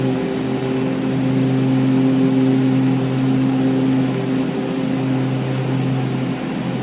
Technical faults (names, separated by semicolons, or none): none